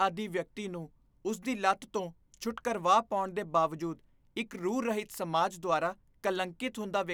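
Speech with no audible faults.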